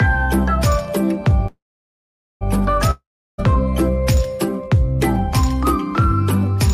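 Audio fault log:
1.47–2.43 s, call audio freeze: The last sound carries on as a fading buzz, then drops to silence for about 0.83 s. When the sound resumes, it picks up exactly where it stopped, with nothing missing. Everything after this point now plays about 0.93 s later than it should. The likely cause is packets held up in transit, so the jitter buffer ran dry and the receiver filled the wait until they arrived.
2.91–3.40 s, long network dropout: Again the last sound stretches into a fading buzz, then goes silent for about 0.36 s. When the sound returns it has jumped ahead. Roughly 0.48 s of the original audio never plays. The gap is about 0.47 s, so the timing stays roughly the same rather than drifting later. The likely cause is a stretch of packets that never arrived, so the receiver concealed the hole and resumed with that part lost.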